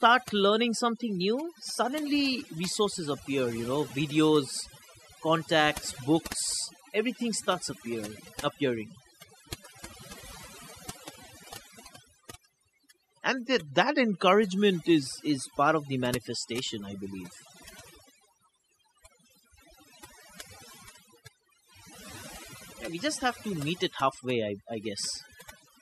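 Across the whole recording, overdone noise removal leaves the gaps between phrases almost silent except for faint twinkling specks. The reduction was set so hard that individual frequency bands near the estimated noise level are pulled down or switched off, taking the quieter parts of the voice with them. Unlike a simple noise gate, which opens and closes on the whole signal, this chops at separate bands, which is what produces the metallic sparkle.

From 1.02 to 2.01 s the audio runs about 5.9% fast and sits roughly a semitone sharp (about 99 cents), then snaps back just before "resources appear you know". The mirror event comes from 13.27 to 15.03 s: about 5.9% slow and roughly a semitone flat (about 105 cents), ending before "is part of the". Speed and pitch move together and hold steady for each stretch, the likely mark of a drift correction step, where clock-matching software jumps the playback rate to refill or drain its buffer. 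Ordinary wow or flutter wanders continuously instead.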